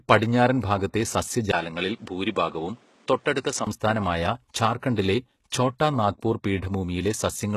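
Throughout, plainly audible codec damage and nothing above 12.3 kHz point to HE-AAC compression, likely at a low bitrate around 16 kbps, with replicated treble that does not match the original.

From 1.51 to 3.67 s, just after "പടിഞ്ഞാറൻ ഭാഗത്തെ", the input likely switched to a poorer device. A 20 ms gap marks the change, the band narrows to 10.2 kHz, and new background noise appears roughly 35 dB below the signal at about the same level.

At 4.96 s, pre-echo spreads hiss about 19 ms ahead of an attack, because the codec's quantisation noise fills the quiet part of the block and softens the onset.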